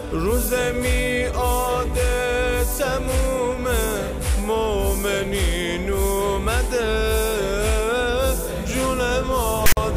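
A hard-edged burst of loud, rasping static, pushed off to one side, cuts in at 9.66 s and gives way to dead silence before stopping at 9.77 s. This is file tags played as audio: a block of text tag data, followed by zero padding, was decoded as though it were samples.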